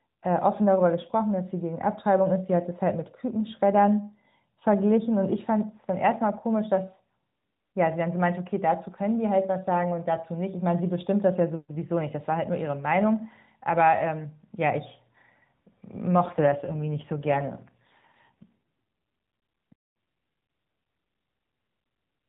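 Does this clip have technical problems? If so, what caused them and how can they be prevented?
Yes. An AMR rate drop runs from 16.24 to 18.54 s. Through this narrowband mobile path, which passes nothing above 4 kHz, the speech turns rougher and more synthetic there. The band stays the same and nothing drops out. The change fits the network switching the AMR-NB codec from about 12.2 kbps down to 5.9 kbps on a weakening radio link, giving up speech bits for error protection until conditions allow the higher rate again. A stronger, more stable radio connection, or a wideband codec with more headroom, would prevent it.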